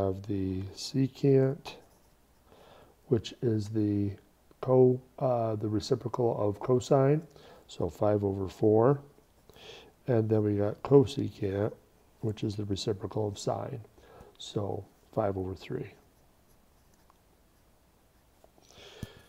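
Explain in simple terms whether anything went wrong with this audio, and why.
Nothing went wrong with this audio that a listener can pick out. There are no breaks, jumps or disturbances anywhere along the way, so there is nothing here that needs explaining.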